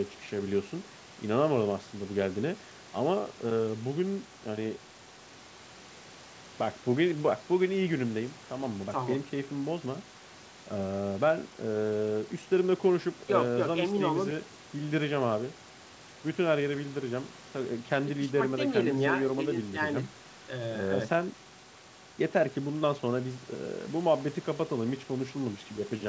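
No faults are audible: the speech stays band-limited to 8 kHz by the call microphone processing and the G.722 coding at 64 kbit/s leaves at most faint traces.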